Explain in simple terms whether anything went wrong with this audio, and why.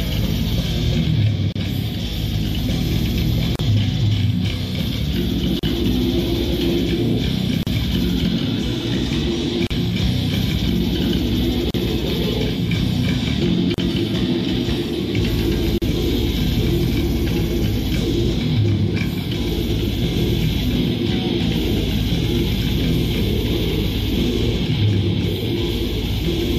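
The sound drops out briefly at regular points: tiny silences open at 1.52, 3.56, 5.59, 7.63, 9.67, 11.71, 13.74 and 15.78 seconds, roughly every two seconds. Each lasts about 31 to 38 milliseconds, then the sound resumes where it stopped. This is a gap at a join of encoded pieces. The audio was compressed in separate chunks and stitched together, and each chunk kept the bit of padding silence its encoder adds at the start and end.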